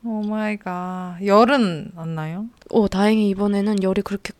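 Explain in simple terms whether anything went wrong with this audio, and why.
Nothing stood out on listening: the speech comes across without any audible problem.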